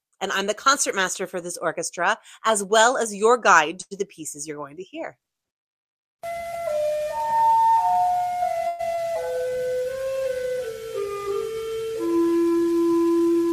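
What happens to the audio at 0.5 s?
Nothing goes wrong at 0.5 s; the audio plays through that moment intact, with no dropout, click, or other fault.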